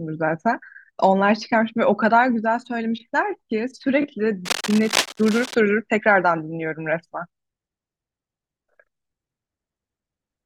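Cable scratch noise runs from 4.45 to 5.55 s, about a second of dense, ragged crackle laid over the speech and sitting only a few decibels below it. The bursts are irregular, more like rustling grit than steady hiss. The likely cause is a worn cable, plug or control being handled, so that its contact resistance jumps about rapidly and injects those uneven noise bursts straight into the signal path.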